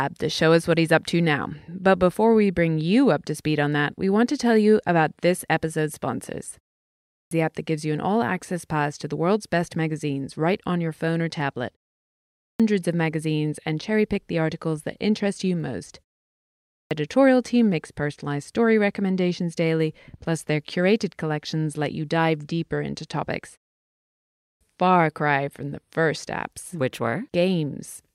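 Clipped start after a pause hits this speech recording at 6.89 to 7.31 s, 12.12 to 12.60 s, 16.41 to 16.91 s and 24.18 to 24.61 s. Each follows a short silence of 0.37 to 0.69 s, after which the output device has dropped into an idle state and needs time to wake and resynchronise. Roughly 0.42 to 0.50 s of each returning phrase is swallowed, so speech bursts in abruptly, missing its opening sounds.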